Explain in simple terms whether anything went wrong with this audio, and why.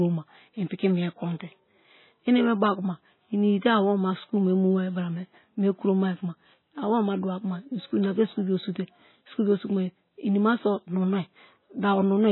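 The speech sounds dull and muffled from start to finish, with a watery, swirling quality and smeared consonants. This is likely heavy MP3 compression: short of data, the encoder removed everything above 4 kHz and kept switching faint details on and off.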